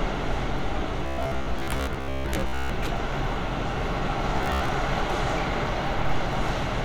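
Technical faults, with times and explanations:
1.06–2.70 s and 4.37–4.69 s, robotic sound from repeated short buffers: new audio likely arrived too slowly, so the playback looped a 15 ms fragment, skipping most of the first stretch and about half the second. That fixed repetition imposes a rigid, metallic 66.7 Hz buzz over the sound.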